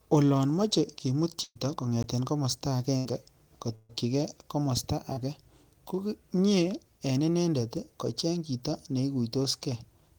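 Right after "moche kimuut" at 1.43 s there's a burst of packet loss: about 120 ms went missing, and the receiver stretched the last sound out, fading it, before a short dead patch. At 2.03 s a 15 ms block of digital silence drops out hard, likely from an unfilled output buffer. More packet-loss bursts hit at 2.97 s (80 ms) and 3.75 s (140 ms), each smearing the held sound and then skipping ahead. At 5.13 s, a short concealed packet loss patches a 40 ms hole with a brief smear.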